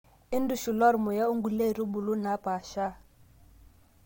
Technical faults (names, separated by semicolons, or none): none